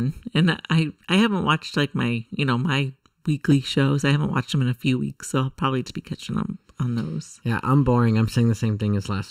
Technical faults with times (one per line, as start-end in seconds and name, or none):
0.00-9.30 channel delay (comb filtering)
3.51 compressed frames skipped
5.89-5.92 compressed frames skipped